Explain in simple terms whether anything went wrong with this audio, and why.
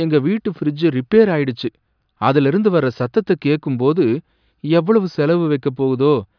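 Nothing went wrong here.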